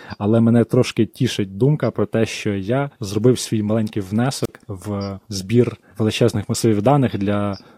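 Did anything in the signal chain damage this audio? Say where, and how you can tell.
Yes. There is a wireless microphone squelch dropout at 4.44 to 4.49 s. Hiss swells, then 34 ms of silence follows as the receiver's squelch mutes the fading radio signal.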